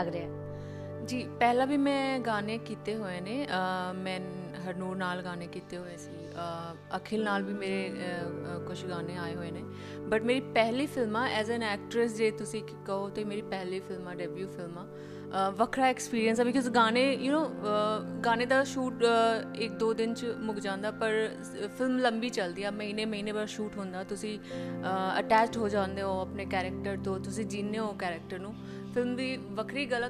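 Nothing stood out on listening; no technical faults could be heard anywhere in the recording.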